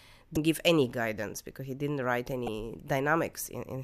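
At 0.34 to 0.37 s, and again at 2.45 to 2.48 s, the speech is hit by damaged data in a compressed stream. In each spot part of the encoded file was wrong, so the decoder couldn't make sense of those frames, lost its place and had to hunt for the next valid frame header. What you hear is a short glitch, about 30 ms long each time, cutting across the speech.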